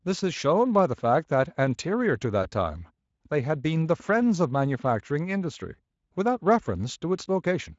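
At 2.43 to 2.49 s the speech briefly smears into a buzzy or noisy tail that fades. This is VoIP packet loss concealed by the speech codec, rebuilding roughly one lost 20 ms frame.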